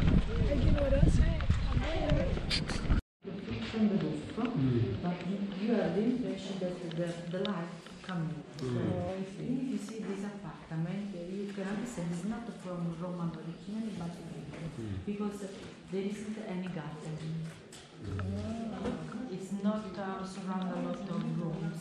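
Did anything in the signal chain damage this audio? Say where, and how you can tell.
Yes. Between 8.42 and 9.09 s, the audio slows by about 5.5% and drops roughly a semitone (about 98 cents) before snapping back. From 12.02 to 14.30 s, it runs about 5.5% fast and rises nearly a semitone (about 93 cents). Speed and pitch move together in abrupt steps, which points to a drift correction step, likely at the driver or buffer stage, where clock-matching software changed the playback rate to drain or refill its buffer.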